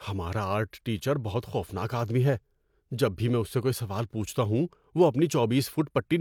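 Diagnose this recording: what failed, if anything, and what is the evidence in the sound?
Nothing failed here, as far as the ear can tell; the speech comes through without anything that points to trouble at any stage.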